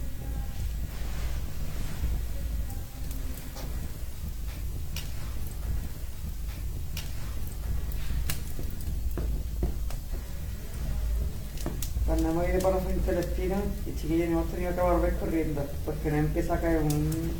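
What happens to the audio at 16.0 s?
At 16.0 s you're hearing computer activity noise, and it isn't a one-off. It runs under the whole clip. The processor, graphics card or mouse pulls changing current, which shifts the ground the audio circuit shares with them, and that wobble lands straight in the sound. Here it's a gritty buzz pulsing at roughly 200 Hz, sitting around 30 dB below the material. It tracks the computer's workload, not anything in the sound itself.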